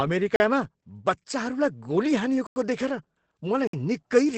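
Speech coded throughout with Opus voice compression in its SILK linear-prediction mode, at a rate that fits about 12 kbps wideband: nothing survives above 8.6 kHz, and the coarsely quantised excitation leaves the voice plainly muffled, hoarse and faintly robotic. Three blocks of digital silence cut the signal out and back with no fade. They occur at 0.36 s (40 ms), 2.47 s (93 ms) and 3.67 s (60 ms), the kind of hole left when the output buffer goes unfilled in time.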